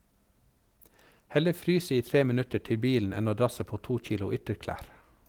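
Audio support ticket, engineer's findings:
No audible faults found in the speech recording; nothing to trace to any component.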